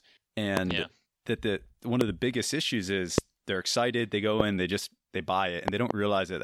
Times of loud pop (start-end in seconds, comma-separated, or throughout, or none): 0.57-0.73, 2.01-2.03, 3.18-3.20, 4.40-4.42, 5.68-5.93